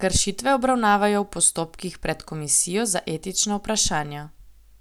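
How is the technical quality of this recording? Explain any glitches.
No technical faults can be heard in this speech recording. There are no glitches to explain.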